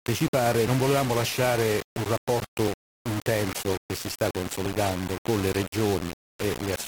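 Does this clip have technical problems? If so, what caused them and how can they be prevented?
Yes. The whole clip has grainy distortion that shifts with the sound, with the error sitting around 10 dB below the signal. The likely cause is low bit depth without dither: about 4 bits, rounded. The error tracks the signal, so quiet passages turn gritty. Prevent it by keeping 16 or 24 bits and applying dither before any reduction.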